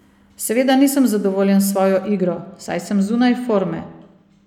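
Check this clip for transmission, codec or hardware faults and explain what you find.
There is one fault: channel delay, producing comb filtering. It starts at 2.04 s and runs to the end of the clip. One channel arrives a fraction of a millisecond after the other, which fits a lag of a couple of samples. When the two are mixed to mono, they cancel at regularly spaced frequencies. Here the first notch sits high, around 10 kHz. From 2.04 s on, the speech loses its top-end air and sounds dull.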